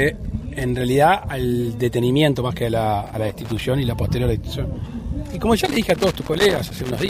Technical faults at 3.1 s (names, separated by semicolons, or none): loose connector crackle